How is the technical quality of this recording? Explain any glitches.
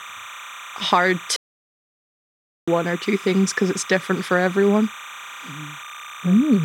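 The recording has two clear problems: a chirpy tone running under the whole thing, and one long dropout near the start.

The chirp is timecode bleed, and it's there from start to finish. Linear timecode from a neighbouring track or cable has leaked into the speech path. That code is a square wave flipping between two pitches, here near 1 and 2 kHz, and it's running at 30 frames per second. It sits roughly 20 dB below the speech, so you hear a steady warbling chatter behind the talking rather than a loud whine.

The dropout is a playback stall, from 1.36 s to 2.68 s, so about 1.3 s of silence. The speech cuts off mid-flow, goes completely dead, and then picks up again. The likely cause is the player running out of buffered data or having its audio thread blocked, so it couldn't feed the output until it caught up.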